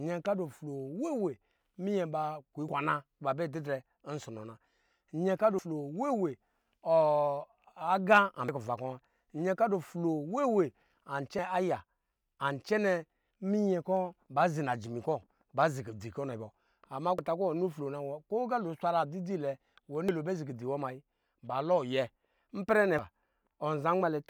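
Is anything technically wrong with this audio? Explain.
Yes. The speech skips forward at 2.69, 5.59, 8.49, 11.39, 14.29, 17.19, 20.09 and 22.99 s, which is audio missing between chunks. Each skip drops roughly a tenth of a second and butts the surrounding audio together with no gap. The regular spacing likely comes from a recorder or processor handling the audio in 3-second chunks and losing a short slice each time it hands over from one chunk to the next.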